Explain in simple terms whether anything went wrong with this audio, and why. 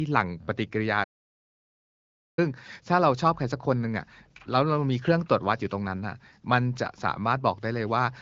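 A playback stall occurs from 1.03 to 2.39 s: the speech stops mid-flow and goes silent for about 1.3 seconds before continuing. The likely cause is that the player either ran out of incoming audio data or was briefly held up, so it had nothing to play.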